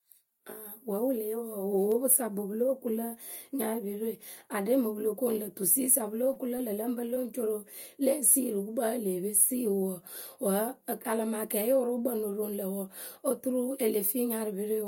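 Speech with short concealed packet loss at 6.33–6.38 s, 6.58–6.61 s and 7.14–7.18 s, each a roughly 20 ms gap the receiver papered over by extending the preceding sound and blending back. That fill gives a brief smear or wobble rather than a silent dropout or hard click.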